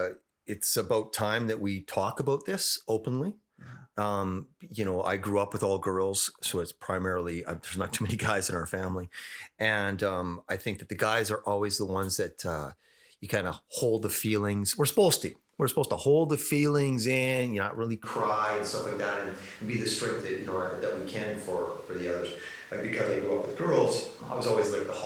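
Right after "in you not really", at about 18.04 s, the speech suddenly goes roomy and hollow, with the bass thinned out and more room noise, roughly 25 dB below the speech, and it stays that way to the end. That's likely a switch to a distant microphone, with the close mic dropping out so we're hearing a farther pickup. The level barely changes, so it's the tone that gives it away, not loudness. The Opus coding at 20 kbps is light throughout.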